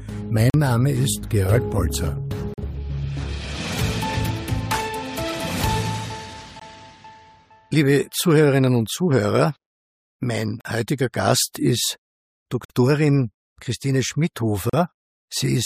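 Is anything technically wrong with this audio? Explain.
Yes. Gaps between stream segments cut hard-edged silent holes of about 40 to 50 ms at 0.50, 2.54, 6.60 (shorter, 19 ms), 10.61, 12.65 and 14.70 s. They fall on roughly 2-second segment joins, where mismatched time stamps leave spaces the player fills with silence. No audio is lost.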